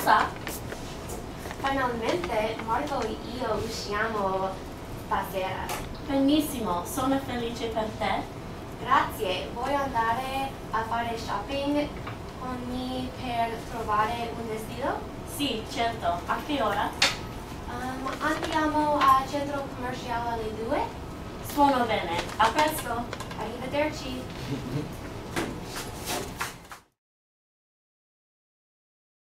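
No technical faults can be heard in this recording.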